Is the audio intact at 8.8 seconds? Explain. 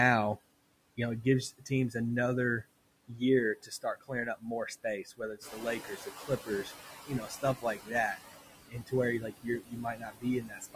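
No. From 8.7 to 8.93 s the speech turns faint and swallowed, dipping by about 17 dB at its deepest, so part of the sound is turned well down for about a fifth of a second. This is speech cut by the noise suppressor. The processor mistook that stretch of speech for background noise and pulled it down along with the noise it was removing, taking out the soft detail instead of leaving it in place.

Around that moment, as throughout, noise suppressor artifacts are also audible. The residual background pumps, sinking in pauses and surfacing under speech, because the suppressor lowers the bands it judges to be steady noise by about 20 dB, frame by frame. By this point the room noise has risen by about 10 dB, to about 10 dB below the speech, which gives the suppressor more noise to chew on.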